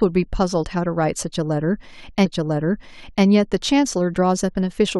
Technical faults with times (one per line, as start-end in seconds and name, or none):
2.24-3.24 stream segment repeated